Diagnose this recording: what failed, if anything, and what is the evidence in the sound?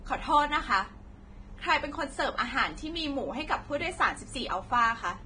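Vorbis compression, heavy, throughout the speech: the treble is grainy and hissy, sibilants are roughened, consonant attacks are smeared, and nothing is heard above 9.7 kHz. The cause is likely at the codec stage, with a low quality setting around 23 kbps. At that rate the encoder lowers its cut-off and quantises the residue over the spectral floor so coarsely that fine high-frequency detail becomes noise of similar energy.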